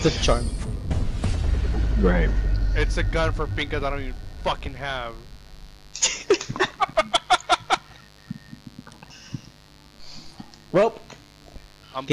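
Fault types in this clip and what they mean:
Mains buzz, throughout: switching spikes from the 50 Hz supply get into the signal twice each mains cycle, building a ladder of harmonics that climbs into the kilohertz range. It is a steady, raspy buzz sitting about 30 dB beneath the sound.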